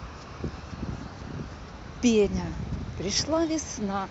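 At 2.25 s the speech jumps forward, a case of compressed frames skipped. The decoder did not play several whole frames, either because they were missing from the stream or because it rejected them as damaged. The gap points to about seven frames of roughly 23 ms each, so around 150 ms of speech is simply gone. It is heard as the speech jumping ahead.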